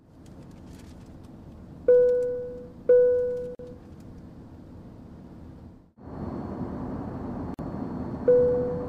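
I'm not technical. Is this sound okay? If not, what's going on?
No. There is a gap at a join of encoded pieces at 3.55 s and 7.54 s. The sound was saved in separate pieces. Each join left a silent gap, about 43 and 47 milliseconds long.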